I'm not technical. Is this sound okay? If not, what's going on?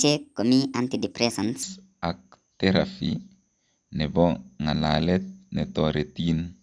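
No. From 0 to 1.63 s the speech sounds high and rushed, about 1.38 times too fast. This is a wrong sample rate, likely 16 kHz audio played back at 22 kHz.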